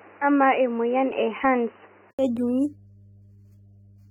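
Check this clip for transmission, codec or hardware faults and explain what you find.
The clip has three faults: a steady mains hum throughout, audible codec damage throughout, and a change of input device partway through the speech.

Mains hum runs for the whole clip as a constant low tone at 50 Hz, about 25 dB below the speech. A ground loop or a nearby transformer lets the power line leak into the signal path. It differs from handling or wind rumble because it holds one fixed pitch and never moves with the speech or with any physical disturbance.

AAC compression is the likely cause of the plainly audible degradation across the whole clip. The damage points to low-bitrate AAC-LC, roughly 28 kbps. At that rate the encoder quantises its frequency lines coarsely and leaves gaps or noise-filled bands, so sibilants turn fizzy and sustained vowels warble. Content reaches up to 19.3 kHz, so this is smeared texture rather than a narrow bandwidth, and it stays the same from start to finish.

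Input switched to a poorer device is the likely explanation for the first section. From 0.0 to 2.19 s nothing reaches above 3 kHz, and a noise floor sits about 30 dB below the speech. At 2.19 s an 80 ms silence marks the switch, and the audio becomes full-band. The level is the same on both sides. The abrupt change of bandwidth and noise at one moment separates this from the codec damage, which is constant.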